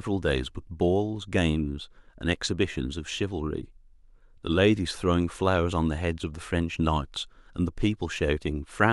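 No technical faults can be heard anywhere in the recording.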